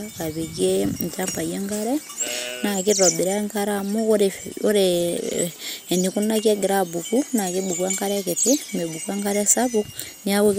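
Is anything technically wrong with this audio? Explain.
Yes, two faults are audible in this speech.

MP2 compression, throughout: the speech sounds dull and carries a gurgling, granular roughness. This is likely MPEG Layer II coding at a rate that fits roughly 80 kbps. The coder divides the signal into 32 sub-bands and shares out too few bits. Upper bands drop out entirely, leaving nothing above 15.9 kHz, and the remaining bands flicker and are coarsely quantised, which gives the plainly audible texture.

Electrical switching spike, at 6.39 s: a sharp, very brief snap sits on top of the speech. It is likely a nearby switch, motor or static discharge arcing, with the audio line picking up that burst as an added click.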